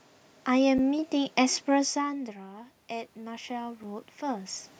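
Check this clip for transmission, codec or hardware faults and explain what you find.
Two faults are present in this speech clip: two brief dropouts to digital silence and a gradual automatic gain rise from about 1.9 s onward.

Block of digital silence, at 0.78 s (about 7.6 ms) and 3.83 s (5 ms). A run of samples was output as zeros, most likely because the output buffer wasn't refilled in time. Each is heard as a tick. On the waveform it appears as a flat line with abrupt edges, and on the spectrogram as a thin vertical gap flanked by broadband click lines.

Automatic gain rising, from about 1.92 s to 4.56 s. The level reaching the microphone fell by about 16 dB as the talker moved away around 2 s, and the gain control slowly added about 6 dB to compensate. Voice and room noise swell together. The waveform envelope and the spectrogram's noise floor both climb gradually across that span.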